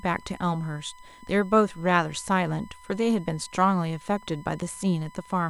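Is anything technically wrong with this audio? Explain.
Yes. Throughout the speech there is USB whine. The USB bus draws current in bursts at its 1 ms frame rate, and that ripple leaks through the shared power or ground into the audio path. The result is a steady whine fixed at 1 kHz, the strongest component, sitting about 25 dB below the speech. Because its pitch never moves, it stays audible under the speech and in any pauses.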